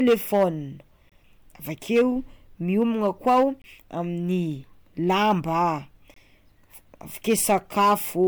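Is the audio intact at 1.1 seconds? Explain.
No. A gap between chunks opens from 1.09 to 1.12 s, a 23 ms silence at a join in audio delivered in 2.5-second pieces. Unlike a dropout, nothing is lost; the sound resumes intact, just pushed slightly later. Generation loss also colours this moment: the sound is swirly, hollow and smeared, with blurred attacks, more than one 128 kbit/s MP3 pass would cause. The likely cause is re-encoding about five times, each pass adding fresh quantisation noise.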